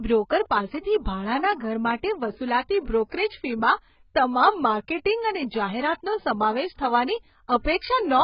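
Throughout the clip the speech sounds dull and smeared, with nothing above about 5.2 kHz, so sibilants lose their edge and take on a warbling, fizzy texture. This is heavy AAC compression damage, likely from AAC-LC at a very low bitrate, something like 12 kbps. At that rate the encoder drops the upper band entirely and quantises the remaining frequency lines so coarsely that detail smears and sustained sounds shimmer.

At 7.78 to 7.81 s a short hiss runs for 36 ms just ahead of a sharp onset, which arrives softened. This is pre-echo. The attack sits late in a transform block, and the coding noise, scaled to suit the loud onset, is spread across the whole block, including the quiet stretch before it, so the hiss appears before the sound that caused it.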